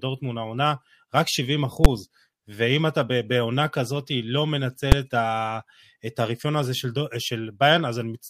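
At 1.85 s and 4.92 s, invalid numbers at full scale: broken calculations pinned short blocks to an extreme value, heard as sharp bangs; waveform shows flat slabs at one extreme, spectrogram full-band vertical lines.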